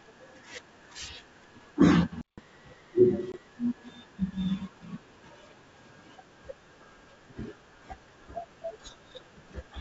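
It's a speech recording, and at 2.21 s the sound just drops out for about 165 ms, a playback stall, most likely the player running dry or its thread getting blocked before output resumes at 2.38 s. Right after that, from 2.38 s to 3.48 s, there's catch-up at higher speed: the backlog runs at 1.15 times normal, so everything's quick and lifted by roughly two semitones until it snaps back. Inside that stretch, at 3.32 to 3.35 s, there's a hard-edged 20 ms hole from packet loss on an ADPCM call, which fits a single lost packet. The decoder's predictor and step size come back out of step with the sender's, so the speech returns slightly distorted for a moment before settling. Underneath it all you can hear wideband telephone-style coding consistent with G.722.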